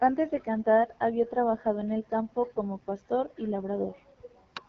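The whole clip carries AMR wideband (HD Voice) codec damage. Nothing is present above about 7.5 kHz. Speech sounds plainly rough and raspy, as the vocal tract model struggles. That roughness points to a low rate, such as 8.85 kbit/s.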